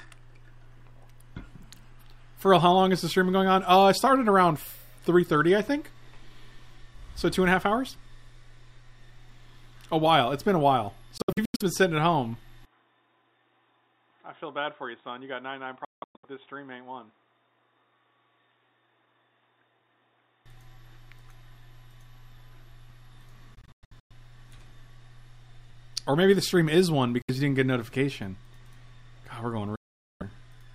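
Packets likely failed to reach the headphones in time, causing Bluetooth dropouts. From 11.18 to 11.62 s the sound breaks into scattered holes with abrupt edges, then resumes further on, as if it had kept playing. At 12.65 s the input likely switched to a poorer device. With no gap at the switch, everything above 3.8 kHz vanishes, the level falls by about 10 dB, and a new noise floor appears, roughly 40 dB down. The sound stays dull and boxy until 20.46 s. During that stretch, another dropout chops 15.85 to 16.25 s. Further gaps follow at 23.55 to 24.12 s, 27.22 to 27.30 s and 29.76 to 30.23 s.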